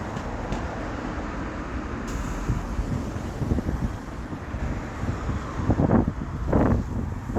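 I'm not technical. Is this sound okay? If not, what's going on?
No. From 2.62 to 4.65 s there is a call bitrate drop. The connection weakened, so the sound was squeezed into far less data. It turns rough and muffled, losing its crisp top end, then clears up again after 4.65 s.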